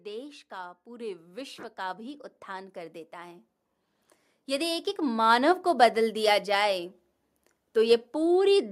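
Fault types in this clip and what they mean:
Automatic gain rising: the level control decided the input was too quiet and kept pushing its gain up, so the speech and the room noise swell together, by about 12 dB from 0.05 to 3.49 s, then about 5 dB more from 4.46 to 5.62 s.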